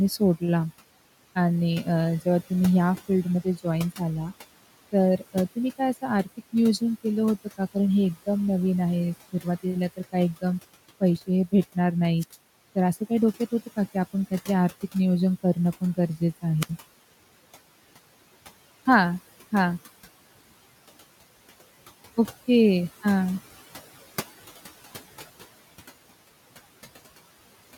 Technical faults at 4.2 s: noise suppressor artifacts; speech cut by the noise suppressor

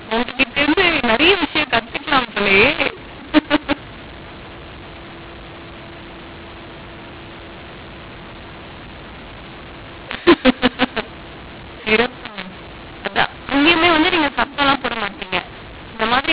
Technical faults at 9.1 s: mu-law and A-law mixed up

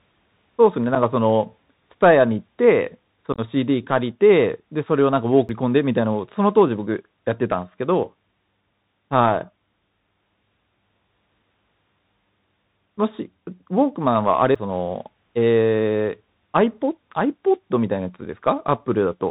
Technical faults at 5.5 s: Bluetooth CVSD headset codec; CD skip

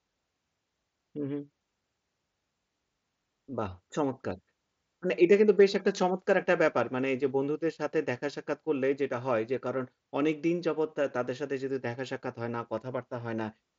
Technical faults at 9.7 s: none

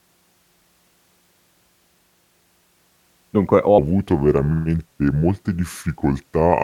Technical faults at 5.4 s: section at the wrong speed

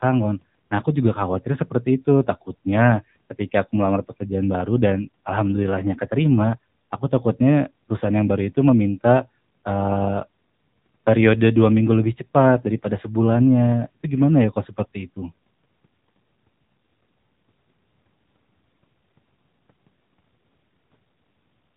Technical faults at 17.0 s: AMR narrowband mobile codec

